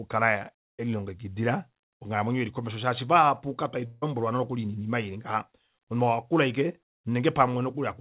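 Speech, carried over a call path whose band stops at 4 kHz, consistent with G.711 mu-law narrowband coding. From 3.86 to 4.04 s, after "komesho shaashi vahapu kakwali" and before "nokuli noinima", the voice gives way to a smeared, fading buzz for about 0.16 s, likely a long network dropout concealed by the receiver stretching the last sound. On a spectrogram this shows as blurred, repeating harmonics losing energy; the waveform shows a decaying, periodic-looking patch with no true silence.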